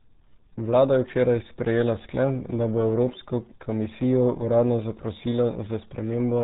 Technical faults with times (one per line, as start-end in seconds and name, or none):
0.00-6.43 RealAudio 14.4 codec